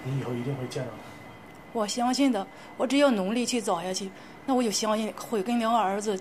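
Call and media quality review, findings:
No audible faults found.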